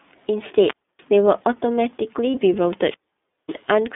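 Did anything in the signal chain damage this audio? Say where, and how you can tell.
Yes. An iLBC codec stage shapes the whole clip. The speech is confined to roughly 200 Hz to 3.6 kHz and has a plainly audible rough, synthetic edge. The coding points to iLBC's 30 ms frame mode at 13.33 kbps. Each frame's excitation is coded independently, which leaves this grainy texture.

A wireless microphone squelch dropout hits at 0.61 to 1.05 s, and again at 2.77 to 3.64 s. Each time, hiss rises, then the output goes nearly silent for about 0.29 s and then about 0.55 s as the receiver's squelch closes on a fading FM carrier, before the speech returns.

Lost iLBC frames occur at 2.31 to 2.34 s. A 30 ms stretch becomes a held, slightly buzzy tone, consistent with a single dropped network packet. The decoder conceals it by repeating the last pitch cycle with noise, and the speech recovers almost immediately because iLBC frames stand alone.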